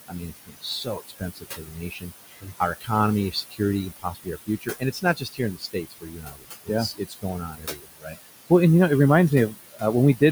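Right through the recording there are noise suppressor artifacts. The suppressor pulls the steady room noise down by about 17 dB, so that background, which sits about 11 dB under the speech, dips between phrases and swells back underneath them.

The same processing keeps cutting speech, too: from 0.04 to 0.66 s, 0.84 to 2.12 s, 2.3 to 2.61 s, 2.81 to 2.9 s, 3.31 to 3.6 s, 3.9 to 6.7 s, 6.92 to 8.17 s and 9.51 to 9.83 s. It mistakes quieter bits of speech for noise and drops them by about 16 to 22 dB, so endings and soft sounds come out swallowed.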